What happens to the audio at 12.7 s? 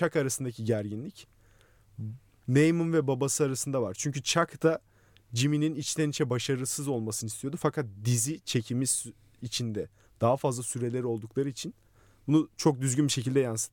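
Nothing goes wrong at 12.7 s; the speech carries on intact through that moment, with no dropout, click or distortion.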